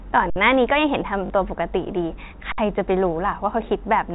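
Underrun with held sample at 0.30 to 0.36 s and again at 2.52 to 2.58 s interrupts this telephone-band speech. Each time the output buffer emptied, the converter froze on its last value, so the waveform sits flat for 60 ms and the sound simply stops. Since almost nothing was lost, playback resumes where it paused, so the restart is soft. Packet loss with last packet repeated at 1.26 to 1.30 s replaces 40 ms, which fits two 20 ms packets, with a repeat of the previous packet. The repeats give a brief robotic stutter buzzing at about 50 Hz. The G.711 A-law coding keeps everything below 4 kHz.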